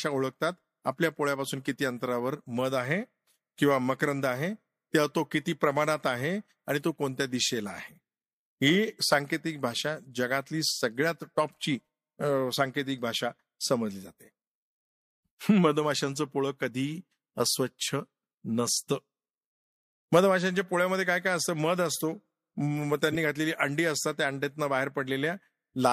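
A speech clip with one fault near the end: a corrupt frame decoded, from 23.12 to 23.15 s. For about 30 ms, energy lands at frequencies where it does not belong. It is heard as a brief chirp, squeak, blip or burst of noise. The error peaks at about -20 dBFS. Flipped bits in the compressed stream were played by the decoder anyway. Gains or codes were misread. The span fits damage to roughly three codec frames.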